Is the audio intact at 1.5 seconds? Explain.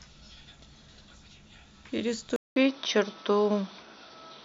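Yes, the audio is intact at 1.5 seconds, with no dropout, click, distortion or other fault audible at that moment.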